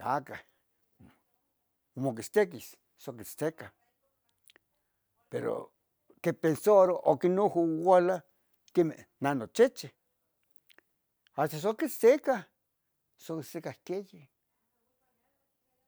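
No technical faults can be heard anywhere in the speech recording.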